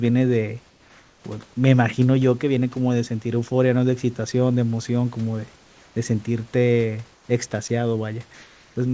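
Comfort noise in place of the background appears in this speech recording at 0.70–1.24 s, 5.56–5.96 s, 7.14–7.28 s and 8.34–8.76 s. In each pause the real background, sitting about 32 to 35 dB below the loudest speech, gives way to a steady, featureless hiss. That hiss is about 3 dB quieter in the first two gaps, about 6 dB quieter in the third, and level in the last. The likely cause is discontinuous transmission with receiver-side synthetic noise. Sound dropped by the voice detector occurs at 7.68–7.70 s, where roughly 10 ms of sound vanishes into that noise, likely because the detector mistook it for background. Throughout, the call codec leaves nothing above 8 kHz.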